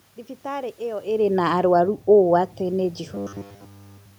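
From 3.15 s to the end at 4.18 s, the speech collapses into a rigid, metallic buzz pitched at 100 Hz that only loosely tracks the syllables. This is robotic sound from repeated short buffers, likely caused by fresh audio arriving too rarely, so the playback kept looping the last fragment of about 10 ms while essentially all the real signal was skipped. The room noise and the level shift near 1.0 s, where the talker moves relative to the microphone, are part of the recording rather than faults.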